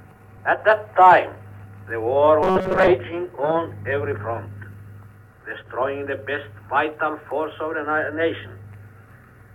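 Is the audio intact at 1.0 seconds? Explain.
Yes, the audio is intact at 1.0 seconds, with no fault audible at that moment.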